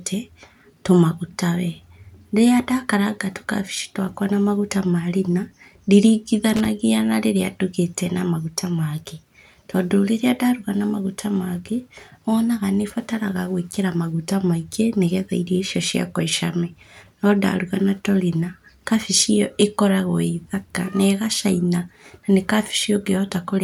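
At about 6.56 s there's a short burst of loose connector crackle, lasting until roughly 6.68 s. A worn or dirty contact is flickering between connected and open, chopping the speech into ragged fragments, so you get about a tenth of a second of irregular scratchy crackle.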